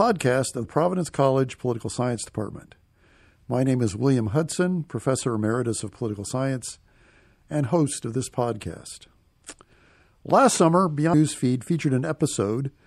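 A watery, swirling quality runs through the whole speech recording, with dulled treble and a metallic, chirpy edge on sibilants. This is plainly audible MP3 compression, likely caused by a low bitrate, with the sound consistent with about 64 kbps. With too few bits to go around, the encoder cuts off the upper frequencies and lets weak spectral detail drop in and out from one frame to the next, which produces the swirl and smears consonant onsets.

At 0.64 s the speech jumps forward slightly, with a short smeared blip at the join rather than a sharp click. This is compressed frames skipped: around three frames, or roughly 70 ms of audio, never reached the output, which points to a frame length of about 24 ms. A larger jump comes at 11.13 s, where around ten frames, close to 200 ms, go missing. Because neighbouring frames overlap, each splice blurs instead of snapping.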